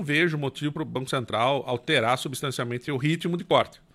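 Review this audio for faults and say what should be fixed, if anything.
Damaged data in a compressed stream at 0.75 s and 3.51 s: corrupted bytes make the decoder misread frames and lose sync, leaving brief chirps, squawks, clicks or short holes in the speech. Prevent it by checksumming files and using reliable transport so compressed frames arrive intact.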